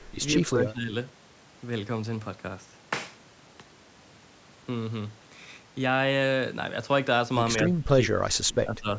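The speech dips about 10 dB from 0.38 to 0.94 s, then almost vanishes, about 30 dB down, from 7.67 to 8.88 s. This is likely speech suppressed in double talk, with the echo canceller muting the talker while the far side spoke.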